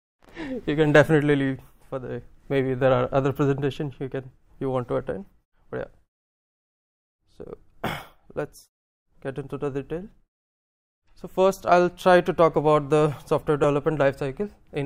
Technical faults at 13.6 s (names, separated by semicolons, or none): dropped buffer (overrun)